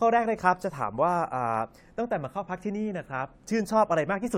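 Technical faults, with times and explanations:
No technical faults can be heard in this speech recording.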